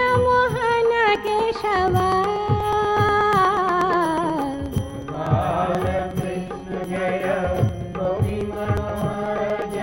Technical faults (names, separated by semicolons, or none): periodic USB or driver dropouts